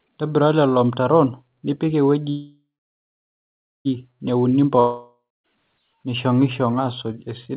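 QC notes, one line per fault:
2.3 to 3.87 s, call audio freeze: the last bit of sound carries on as a fading buzz, then about 1.2 s of silence fills the rest of the gap. When the audio picks up again it continues exactly where it stopped, so nothing is lost, but everything after this runs about 1.55 s late. That's likely packets held up in transit, leaving the jitter buffer empty while the receiver stretched what it last had.
4.8 to 5.46 s, long network dropout: here the gap is filled the same way, a short decaying buzz and then about 0.23 s of silence, but this time the audio resumes further along, with roughly 0.64 s of material missing. That's likely a real loss of packets that never arrived, rather than a late delivery, so the receiver simply skips ahead. The narrowband call sound, with nothing above 4 kHz, fits G.711 A-law at 64 kbps on either side of the gap.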